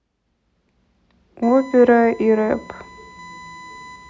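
At 1.4 s a USB whine starts and runs to the end. It is a thin, steady tone at 1 kHz, roughly 25 dB below the speech. The bus draws current in 1 ms frames. That ripple leaks in through power or ground.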